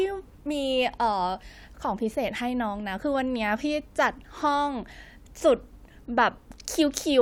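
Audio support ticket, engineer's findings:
No technical fault found in the speech signal at any point; no action required on the audio path.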